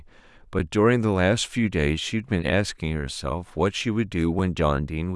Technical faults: underrun with held sample

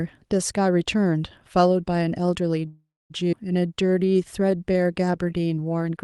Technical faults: call audio freeze; skip ahead; jitter buffer slow-down

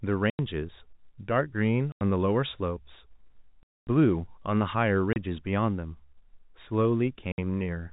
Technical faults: packet loss filled with silence

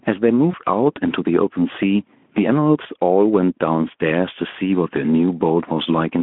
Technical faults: gain pumping; VoIP packet loss concealed by the speech codec

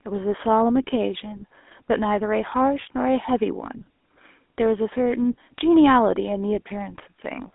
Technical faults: GSM full-rate codec

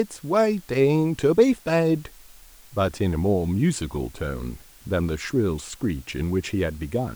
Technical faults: low bit depth with dither

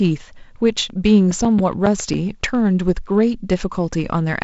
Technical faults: CD scratch ticks

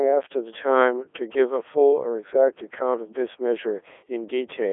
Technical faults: Codec 2 vocoder

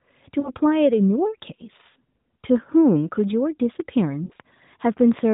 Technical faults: lost AMR speech frames; train of clicks

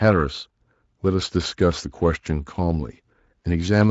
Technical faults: none

